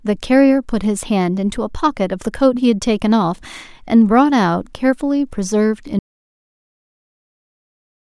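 At 5.99 s the speech cuts off abruptly into dead silence, with no room tone, and stays silent to the end of the clip. This is an audio dropout to silence, most likely the input was lost while recording continued writing silence.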